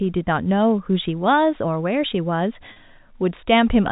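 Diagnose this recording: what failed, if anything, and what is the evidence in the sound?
Packet loss with pitch repetition at 2.73 to 2.76 s, a network-stage fault: about 30 ms of speech, which fits a single lost packet, is bridged by repeating the last pitch period, giving a briefly held, buzzy sound in the band-limited G.711 telephone audio.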